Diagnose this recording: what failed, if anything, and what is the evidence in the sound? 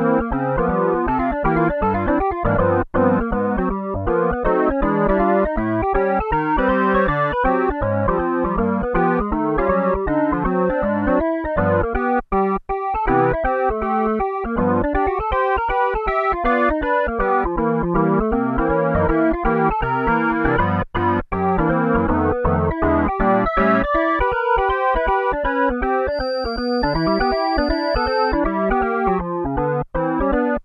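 Feedback whistle, 26.05 to 28.41 s: a thin, steady 4.7 kHz tone wavers about 20 dB below the sound, likely from a loudspeaker-to-microphone loop held right at the edge of feedback.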